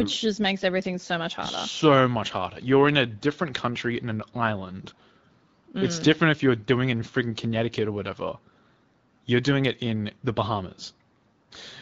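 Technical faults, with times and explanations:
The speech signal has no technical faults; it has passed through the AMR wideband (HD Voice) codec at 12.65 kbit/s, a rate at which that codec leaves only light coding traces.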